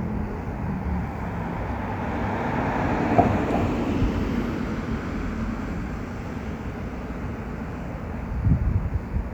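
Right from the start and all the way through these everyday sounds there's a mains buzz sitting underneath, built on 50 Hz. Something like a dimmer, a rectifier or a missing shield is letting sharp switching spikes into the signal twice per mains cycle, so you get a stack of harmonics climbing up into the kilohertz range. It's quiet, roughly 35 dB below the sound itself, but it's a steady, raspy edge that never lets up.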